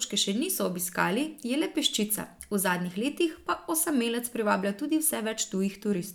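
No technical faults can be heard in the speech.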